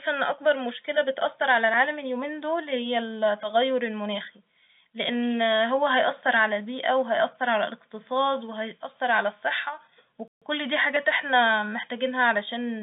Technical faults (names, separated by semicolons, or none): dropped buffer (overrun); playback stall